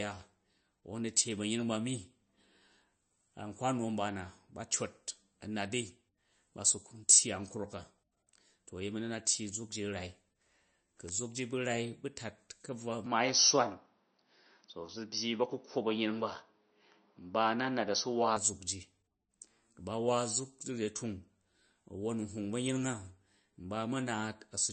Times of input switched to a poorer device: 13.06-18.36

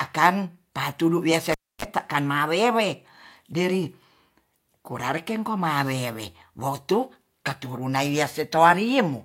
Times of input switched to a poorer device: none

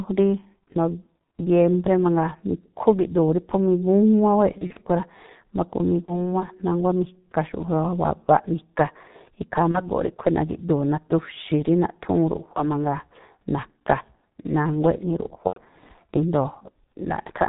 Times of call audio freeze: none

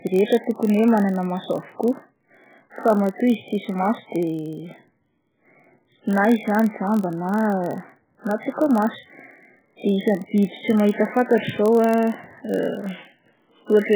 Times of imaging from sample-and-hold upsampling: none

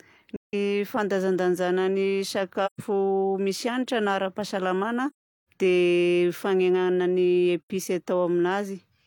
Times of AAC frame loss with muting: 0.36-0.54, 2.65-2.80, 5.10-5.48, 7.70

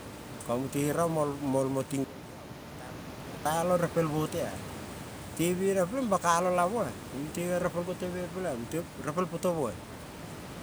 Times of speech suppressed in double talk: none

